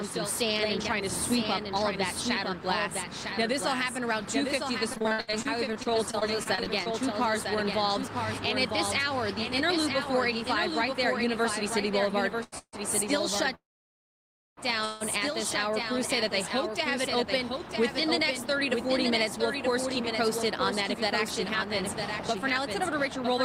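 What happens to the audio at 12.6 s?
A call audio freeze runs from 12.58 to 12.75 s, likely because delayed packets left the jitter buffer empty. The last sound continues as a fading buzz or hiss, then 60 ms of silence, before resuming where it stopped. Just before it, from 12.43 to 12.54 s, a short stall from a late packet holds the preceding sound for 89 ms, with a slight buzz or dip, until the packet arrives. Underneath it all, a doubled audio track trails about a second behind at roughly 5 dB lower, likely from a second, slower capture path.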